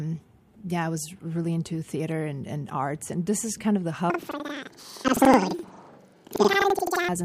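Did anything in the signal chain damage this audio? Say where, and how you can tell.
Yes. From 4.1 s to 7.09 s, right after "is kind of the", sample-format conversion treats planar audio as interleaved. Each 85.33 ms block, which fits a 4096-sample buffer, plays left then right at double speed, so the speech jumps an octave with 11.7 Hz flutter.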